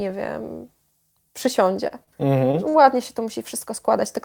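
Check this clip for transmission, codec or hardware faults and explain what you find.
Four short stalls from late packets occur, at 1.87–1.92, 2.04–2.09, 2.51–2.55 and 2.69–2.83 s, the last just before "się to". Each time the jitter buffer ran dry. The last sound was stretched for 22 to 49 ms, then speech resumed intact, briefly held with a faint buzz or dip.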